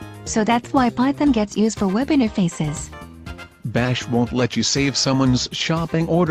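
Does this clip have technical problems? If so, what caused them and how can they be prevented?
Yes. Corrupt frames were decoded: brief glitches at 1.33 to 1.37 s (about two frames, near -30 dBFS) and 5.51 to 5.54 s (about one frame, near -25 dBFS), where flipped bits misplaced spectral energy. Prevent this with checksums that make the decoder conceal damaged frames instead of playing them.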